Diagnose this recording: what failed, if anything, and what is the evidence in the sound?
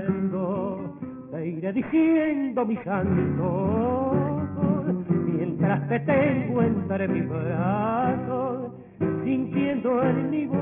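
Aliasing throughout, from sample-rate conversion: energy above 3 kHz folds back as gritty tones some 25 dB down, fitting an unfiltered drop to 6 kHz.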